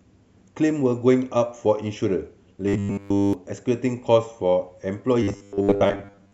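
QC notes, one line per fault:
2.66 to 3.33 s, robotic sound from repeated short buffers. The speech becomes a rigid metallic buzz pitched at 100 Hz. Nearly all of it is one short slice replayed, likely a 10 ms buffer repeated while fresh audio failed to arrive.
5.23 s to the end, robotic sound from repeated short buffers. The same 100 Hz buzz returns, though somewhat less solid, with most of the stretch looped. Gaps in incoming audio were likely filled by replaying a 10 ms chunk.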